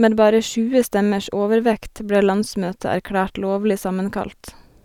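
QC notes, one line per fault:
No faults heard.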